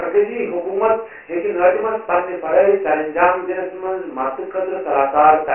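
Dialogic VOX ADPCM coding runs through the whole speech clip. Each sample is stored as a 4-bit step that tracks the waveform, and the data rate points to 24 kbps, which fits 6,000 samples a second. That caps the band at 3 kHz, so the voice sits in a narrow telephone slot with no low end below 300 Hz and nothing above 3 kHz. The coarse steps leave heavy, gritty hiss riding on every syllable.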